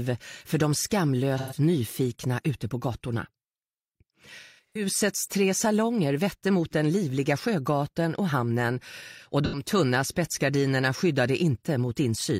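The audio has AAC frame loss with concealment at three points: 1.37–1.57 s, 4.40–4.85 s and 9.45–9.63 s. The decoder lost about 128 ms, 256 ms and 85 ms of data and rebuilt each gap from the last good spectrum. The middle loss is scattered, with its longest run roughly 150 ms. Unlike plain dropouts, which cut to silence with clicks, these patches stay filled but sound smeared, noisy or phasey.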